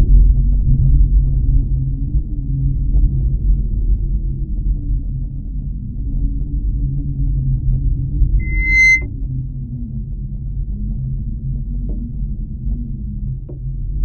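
Loudspeaker feedback squeal appears from 8.39 to 9.06 s. A microphone is picking up the loudspeaker it drives, and at 2.1 kHz the loop gain rises above one, so that frequency feeds on itself. A single tone swells out of the sound over roughly 0.4 s into a piercing squeal that ends up a few decibels louder than the surrounding audio before it stops.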